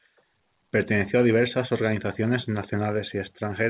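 No technical faults can be heard in this speech recording. It has come over a working WebRTC call path, and nothing is present above 4 kHz, a band limit that fits narrowband G.711 A-law telephony at 64 kbps.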